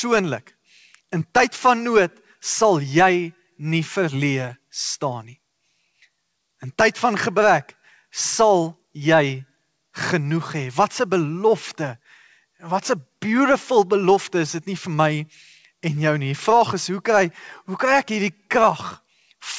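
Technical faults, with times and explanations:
No faults: the speech shows nothing above 8 kHz, as expected from the call path, which fits a G.722 wideband codec at 64 kbps.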